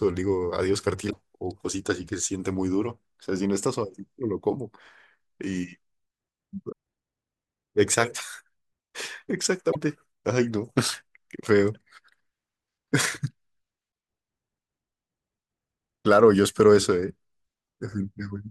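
Speech with brief glitches at 1.09–1.13 s, 6.71 s, 9.71–9.76 s, 13.91 s and 17.65 s, each a short chirp, noise burst or dropout as the sound skips ahead. A broken MP3 bit reservoir is the likely cause: after lost frames of about 24 ms, decoders read another frame's bytes.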